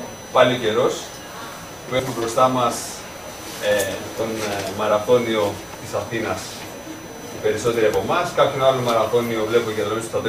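A fixed-pitch USB whine runs under the sound for its whole length, built on a 1 kHz fundamental with its strongest component at the 6 kHz harmonic, sitting about 25 dB below the signal. This is current drawn in the bus's 1 ms frames leaking into the audio path through shared power or ground. At 1.99 s the audio jumps ahead by roughly 50 ms, heard as a brief smeared blip instead of a sharp click, because compressed frames were skipped. The gap is consistent with about two lost 26.1 ms frames that the decoder never played, and the overlap between neighbouring frames softens the join.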